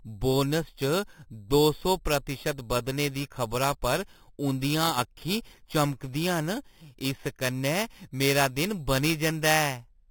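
Throughout the speech, the rate was raised by simply holding each sample until the next one, with no smoothing filter, which fits an 8 kHz source brought up to 48 kHz. This imaging from sample-and-hold upsampling folds mirrored copies of the spectrum into the empty upper band, the first sitting between 4 and 8 kHz at about 12 dB below the signal. The result is a bright, metallic fizz that rises and falls with the voice.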